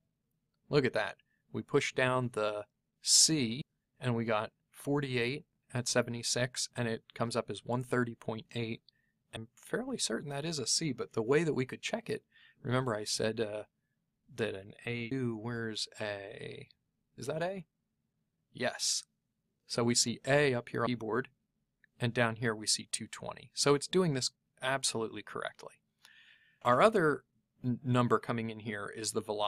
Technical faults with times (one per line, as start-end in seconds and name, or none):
3.61 audio missing between chunks
9.36 audio missing between chunks
15.11 audio missing between chunks
20.86 audio missing between chunks
26.61 audio missing between chunks